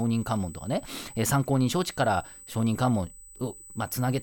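A thin, steady high-pitched whine sits under the speech for the whole clip, fixed at 8 kHz and only about 20 dB below it. This is USB whine: the bus's 125-microsecond microframe current draw leaking into the audio through power or ground.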